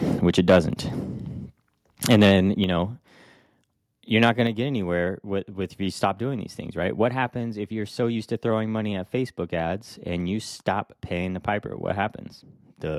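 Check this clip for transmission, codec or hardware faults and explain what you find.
The clip has two related hardware-side faults: repeated microphone overload, and the input volume being stepped down in response.

Microphone overload occurs at 0.38–0.59 s, 2.1–2.31 s and 4.22–4.29 s, the last just before "going to get anywhere". Peaks push about 4 to 6 dB past full scale, likely from excessive input gain, so the converter flattens their tops. Those syllables take on a harsh, crackling edge.

Microphone volume stepped down occurs at 2.64 s and 4.47 s, the second just before "to get anywhere with". Each time, the level of voice and background together falls by about 4 dB in one step, likely the call software cutting device input gain after the preceding clipped peaks.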